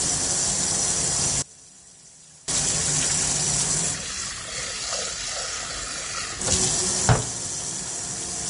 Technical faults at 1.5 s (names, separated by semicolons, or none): Vorbis compression; one channel inverted